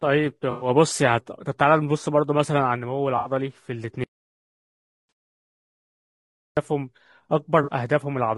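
Speech coded throughout with a rough, grainy quality: noise fills the gaps between voice harmonics and the top band sounds thin and synthetic. That low-delay AAC compression damage is plainly audible and is likely the AAC-ELD codec used in video calls, running at around 32 kbps. Its very short frames resolve pitch poorly and spend bits inefficiently, leaving too few at this rate to keep the voice clean. Brief smeared, noisy, phasey patches break through the sound at 0.51 to 0.69 s (about 100 ms), 3.17 to 3.31 s (about 80 ms), 5.09 s and 7.63 to 7.70 s (about 40 ms). These are AAC frame loss with concealment. Whole coded frames went missing, and the decoder stood in for them by reusing the last good spectrum with scrambled or interpolated content. The lengths fit runs of roughly five, four, one and two lost 20 ms frames. The 5.09 s loss falls inside the silent stretch described next, so little of it can be heard. 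From 4.04 to 6.57 s, about 2.5 s, the sound cuts out mid-flow into silence with no room tone, then returns abruptly. This audio dropout to silence means the input stopped reaching the recorder, which kept writing silence. The likely cause is a disconnected device, a failed link or an accidental mute, and whatever was said during the gap is lost.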